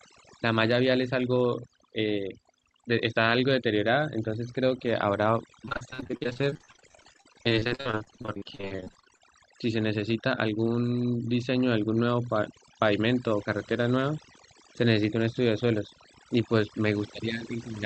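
From start to end, the speech carries overdone noise removal. The noise reducer was pushed too hard. It drops any frequency band that sits near its noise estimate, and soft parts of the voice fall away with the hiss. The background drops and breaks up, dotted with twinkling specks. The call codec's top limit of about 8 kHz adds some dullness on top.

From 5.65 to 9.22 s, repeated packet loss gives a robotic sound. Audio arrived late or not at all, again and again. Each hole was filled by stretching the last sound forward. About a third of that span is patched this way, roughly 1.3 s in all. The gaps are short, the longest 46 ms, but they come in quick succession. The speech turns choppy, with pieces missing.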